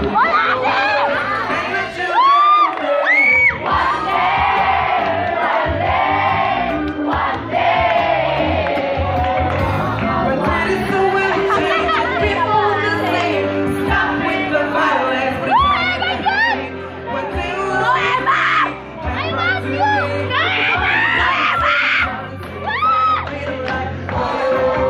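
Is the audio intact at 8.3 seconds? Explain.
No. From 8.25 to 9.15 s a drift correction step shifts the sound about 5.7% faster and close to a semitone (96 cents) sharp, then it snaps back. This is likely clock-matching software changing the playback rate in a single step to rebalance its buffer.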